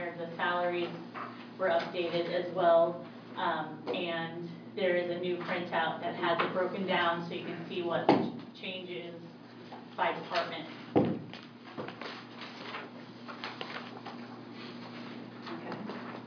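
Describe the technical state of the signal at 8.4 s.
At 8.4 s the signal is intact, with no dropout, distortion, glitch or other audible fault.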